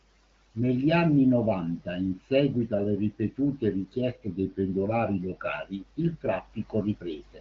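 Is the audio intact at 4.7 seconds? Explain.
No. At 4.7 s the speech sits inside a span from 4.27 to 5.53 s, just after "in seguito alle ripetute", where it slows by 5.6% and drops a semitone, then snaps back. This is most likely a drift correction step: clock-matching software changed the playback rate in one jump to rebalance its buffer. On a spectrogram the harmonic stack steps down about 6% at 4.27 s and jumps back up at 5.53 s.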